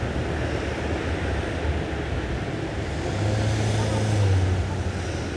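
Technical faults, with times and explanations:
Throughout: wrong sample rate. Everything runs about 1.38 times too fast and sits roughly 5.5 semitones high, with speed and pitch rising together, which fits 16 kHz material being played at 22 kHz with no resampling. That's why it all sounds hurried and chirpy.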